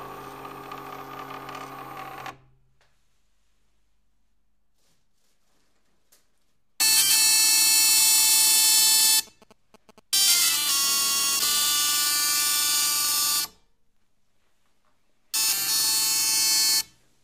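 GSM signalling bursts run from 8.48 to 10.70 s. A nearby 2G phone is signalling, and its radio bursts are rectified by the audio circuit into a galloping dit-dit-dit of short buzzes at about 217 Hz, sitting roughly 25 dB below the programme.

Periodic USB or driver dropouts follow from 13.07 to 15.07 s. Every 0.1 s a background task stalls the audio path, and a tiny sliver of audio, well under a millisecond, is replaced with silence. About twenty evenly spaced ticks result, audible wherever signal is present.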